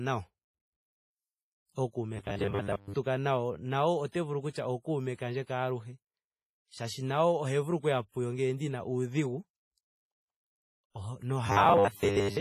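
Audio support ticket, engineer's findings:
Heavy codec damage throughout, washy ringing, hiss breathing with speech, nothing above 15.3 kHz. Likely WMA compression at a low bitrate; long transform blocks smear quantisation noise.

Robotic sound from repeated short buffers at 2.17–2.96 s, just before "nayo nayo ote vulu", and 11.47 s to the end. Rigid 100 Hz buzz, likely from repeating 10 ms chunks, with most real audio skipped.

Pre-echo at 4.50–4.55 s, after "nayo nayo ote vulu", and 8.09–8.14 s, between "vulu okuya" and "ngele ndina udhigu". About 50 ms of hiss ahead of attacks, with codec noise spread across the block.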